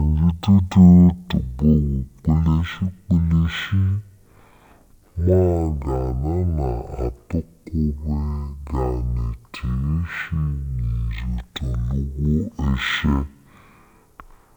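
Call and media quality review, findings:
Stereo read as mono, whole clip: speech at half speed (0.5x), a full octave low (-12 semitones). Probable component: capture or decode stage treating interleaved left/right samples as one channel. Unlike a sample-rate mismatch, the drop is exactly one octave, with a fainter mirror image in the upper half of the spectrum from the alternating channel samples.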